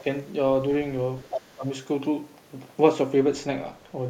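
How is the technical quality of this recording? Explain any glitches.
The recording has echo-cancellation problems: the speech is pulled down twice, and a second voice leaks in once.

Speech suppressed in double talk, from 0.00 to 0.06 s and from 1.55 to 1.68 s: the level dips slightly at the start, then drops sharply, by roughly 20 dB, in the later spot. This likely happens because the echo canceller cannot tell the talker from loudspeaker echo while both sides speak, so it turns everything down.

Other side's voice leaking through, from 1.20 to 1.42 s: a second voice comes through only a little quieter than the main speech. This is likely residual loudspeaker sound that the echo canceller failed to remove from the microphone signal.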